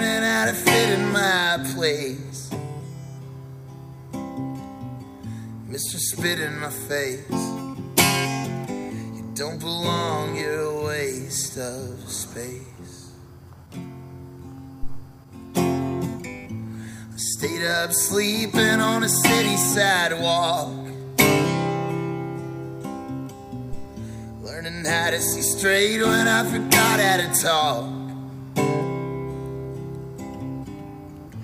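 A phantom power thump lands at 14.83 s and is gone by 15.05 s. A supply was switched on or off on a live input, and the sudden voltage step went straight through the coupling capacitors into the signal path. It is a single deep, low-frequency thud peaking at about -15 dBFS. It falls away quickly over roughly 50 ms, so it reads as a dull knock rather than a crackle or click.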